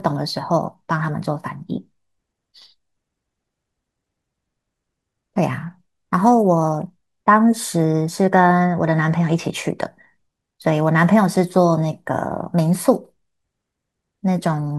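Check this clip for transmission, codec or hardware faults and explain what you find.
Nothing in the recording points to a fault in how it was carried, encoded or captured. The speech comes through with no audible disturbance at any point.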